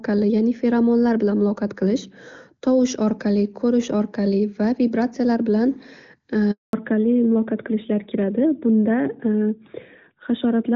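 At 6.51 s the speech cuts out for 220 ms in a handover gap, as the call switches networks and no frames reach the receiver. The sound fades within a few tens of milliseconds and stays silent until 6.73 s, so that stretch is lost.

From 6.73 s to the end, the call shows a fallback to narrowband. It switches from HD Voice at a rate fitting about 23.85 kbit/s AMR-WB to the older narrowband codec. Nothing remains above 4 kHz, and the speech turns duller and rougher.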